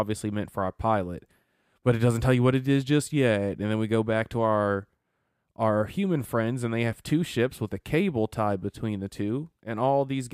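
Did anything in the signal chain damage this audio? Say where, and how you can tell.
No, nothing in the signal chain damaged this audio, and there is no point in it where harm can be heard.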